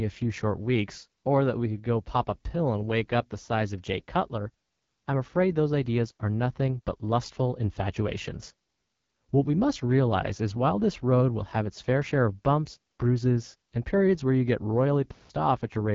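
From start to finish the speech has passed through the AMR wideband (HD Voice) codec at 8.85 kbit/s, the second-lowest rate of that codec. At this rate the pulse-driven vocal tract model has too few bits to follow the voice closely, so the damage is plainly audible: the speech sounds rough and raspy. The band above 6.4 kHz is filled with shaped noise rather than real detail, and nothing at all is present above about 7.4 kHz.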